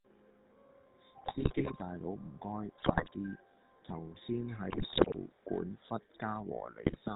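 GSM full-rate codec damage runs throughout: the speech is cut off above 4 kHz and has a buzzy, gravelly roughness from the sparse pulse excitation, consistent with a 13 kbps full-rate coder.

GSM bit errors strike at 1.18–1.71 s, just before "大佬", then at 2.78–3.11 s, 4.70–5.17 s and 6.84–6.97 s. Corrupted filter, pitch and gain values warp the spectrum and level frame by frame, producing squawks, pops and gargling.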